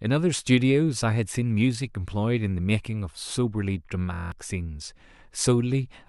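A speech clip in which, from 4.13 to 4.32 s, the sound collapses into a rough, steady buzz at about 43 Hz. This is a system hang loop: the system froze while the hardware replayed one 23 ms buffer eight times, fitting a 1024-sample buffer, and about a fifth of a second of audio was lost.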